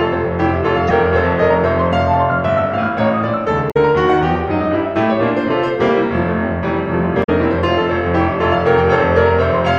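At 0.88 to 0.91 s, 3.67 to 3.77 s and 7.20 to 7.29 s the music breaks into brief chirps, squawks, clicks or short holes caused by damaged data in a compressed stream: corrupted bytes make the decoder misread frames, lose sync and hunt for the next frame header.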